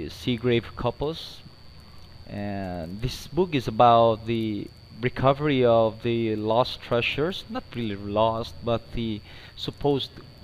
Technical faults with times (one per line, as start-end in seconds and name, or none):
none